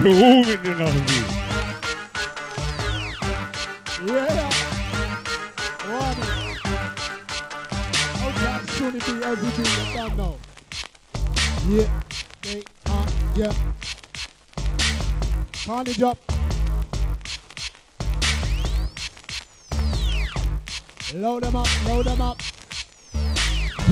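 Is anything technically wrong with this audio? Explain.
Yes. The resampler restarted on every block, throughout the clip. Each 20 ms block was converted separately, apparently upsampling by two (consistent with 24 kHz to 48 kHz), so each block edge carries a small error. The result is a 50 Hz buzz that follows the signal and stops in silence.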